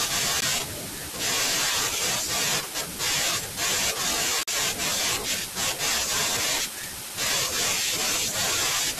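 At 0.41 s and again from 4.43 to 4.48 s, the speech drops into brief hard-edged silence, about 15 ms and then 44 ms. This is a gap between stream segments: mismatched timestamps at the joins of what sound like 2-second segments leave holes that the player fills with silence, while no audio is lost. A waveform shows flat lines with abrupt edges, and a spectrogram shows clean vertical blank stripes.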